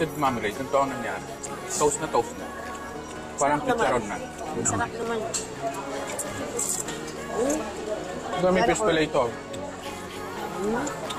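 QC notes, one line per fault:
Throughout: filter restarted on every block. A regular buzz at about 86 Hz rides on the audio, rising and falling with the signal's level. The filter loses its memory at each block boundary and starts again from silence, so every block opens with a small transient. At this repeat rate the ticks merge into a buzz. The rate fits a 512-sample block. Mains hum keeps a steady level whatever the signal does, and dropout clicks arrive irregularly, so neither matches this buzz.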